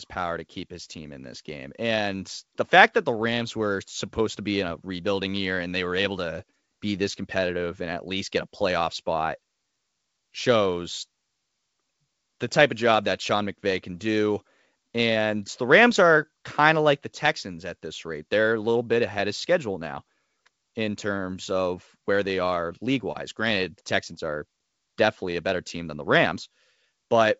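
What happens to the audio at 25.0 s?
Nothing goes wrong at 25.0 s: the speech there comes through intact over its G.722 wideband telephone coding, with the band reaching to about 7.7 kHz.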